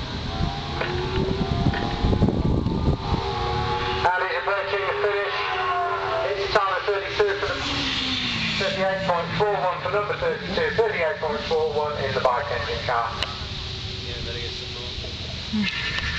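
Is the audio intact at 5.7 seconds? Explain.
Yes, the audio at 5.7 seconds is intact, with no dropout, click, distortion or other fault at that moment.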